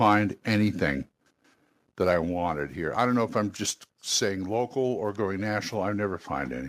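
From 0.03 to 0.13 s the loudest peaks sound harsh and crackly, pushing about 1 dB past the converter's limit. This is likely microphone overload, with input gain set too high. A small fraction of waveform peaks show flattened tops, and the spectrogram shows brief broadband smearing above the speech harmonics.

At 1.02 s the whole level, voice and background alike, drops by about 2 dB in one step. This is likely the microphone volume being stepped down automatically after the earlier overload. The waveform envelope shows a sudden, permanent narrowing, and the spectrogram dims slightly across all frequencies.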